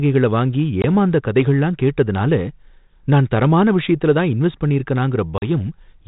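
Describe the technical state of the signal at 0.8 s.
At 0.82 s a packet loss on an ADPCM call cuts a hard-edged hole of about 20 ms, roughly one packet, in the speech. The decoder's predictor and step size lose track of the sender's, so the speech resuming at "ஏமாந்த கதைகளல்லாம் கேட்ததுனால" comes back briefly slightly distorted before settling.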